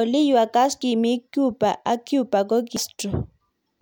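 At 0.82 s and again at 2.77 s there's a quick glitch from damaged data in the compressed stream. Some bytes got mangled, so the decoder misread those frames, lost sync and hunted for the next frame header before the speech carried on.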